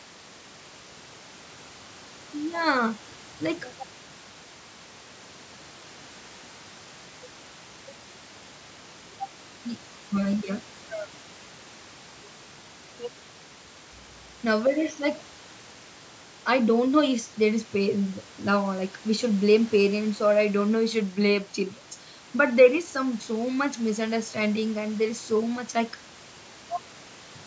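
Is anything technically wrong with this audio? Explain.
No, nothing is technically wrong with this speech recording. The bandwidth stops at about 8 kHz, as expected from a call's microphone processing, and the room's background noise sits about 27 dB below the speech.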